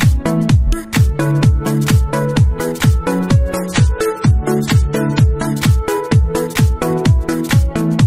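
From 3.55 s to 5.55 s the player falls back to a lower-bitrate rendition of an adaptive stream, most likely because the connection slowed, then returns to the higher one. For those two seconds coding artefacts rise, which points to a drop from around 96 kbit/s to about 27 kbit/s AAC. Both switches are abrupt and leave no gap in the audio.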